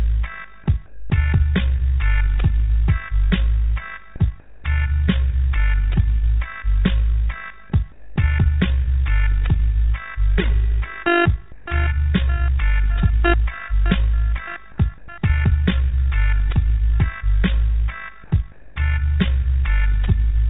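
A fast, rough flutter runs through the whole clip, a tremolo of about 6 dB pulsing at roughly 50 times a second. This is overlap-add ripple. The sound was split into windowed frames and rejoined with an overlap whose windows do not add up to a steady gain, so the level swells and dips once per frame. The result is a rough, fluttering texture laid over everything, band-limited like the rest of the clip to nothing above 4 kHz.

In the quiet gaps, the background briefly turns flat and featureless at 0.86 to 1.1 s, 4.4 to 4.64 s, 7.92 to 8.16 s, 11.52 to 11.66 s, 14.98 to 15.08 s, 18.24 to 18.32 s and 18.52 to 18.76 s. Each patch lasts between 80 and 240 ms and sits about 24 dB below the loudest material, shifting the level by no more than about 1 dB. This is comfort noise in place of the background, likely from discontinuous transmission: the sender stopped transmitting during pauses and the receiver filled them with synthetic, evenly shaped noise that lacks the detail of the real ambience.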